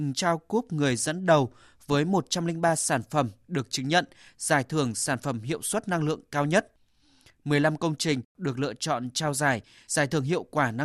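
No technical faults are audible.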